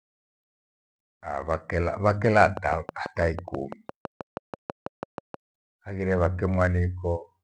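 From 2.1 to 5.35 s a train of clicks ticks steadily over the speech at about 6 per second, roughly twenty in all. Each click rises about 10 dB above the signal. On a spectrogram they show as evenly spaced thin vertical lines, and on the waveform as sharp spikes. The likely cause is interference or a faulty connection or power supply.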